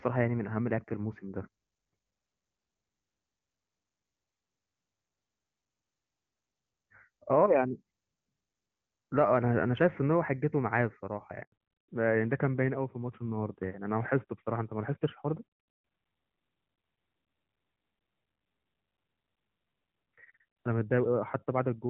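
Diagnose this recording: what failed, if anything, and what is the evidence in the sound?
The call path failed at the network stage during a handover. At 11.42 s the speech fades out within a few tens of milliseconds and the audio stays silent until 11.52 s. That is a 100 ms handover gap. The phone was moving the call to a new network link, and no speech frames arrived while the switch happened. Whatever was said in that tenth of a second is gone. There is nothing left to recover.

The second failure is in the codec, a fallback to narrowband that starts at 11.52 s and runs to the end. Before the gap, the speech is clean and full, as expected from AMR-WB HD Voice at a high rate, likely 23.85 kbit/s. After it, everything above 4 kHz is gone. Sibilants turn dull and the tone is rougher. This fits a switch to AMR-NB at about 12.2 kbit/s on the new link.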